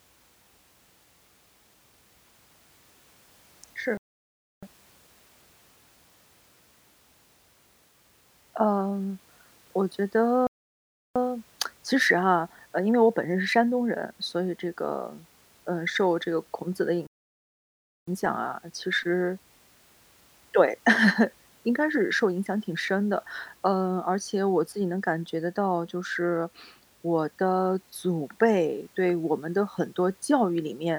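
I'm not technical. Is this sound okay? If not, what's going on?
No. The speech cuts out to silence three times, then carries on: at 3.97 s for about 0.65 s, at 10.47 s for about 0.69 s, and at 17.07 s for a full second. This is a playback stall, likely the player briefly running out of audio data to play.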